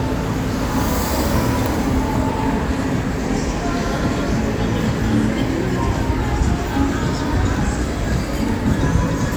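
No technical faults can be heard anywhere in this recording of sounds. There is nothing here to place on a timeline or trace to a cause.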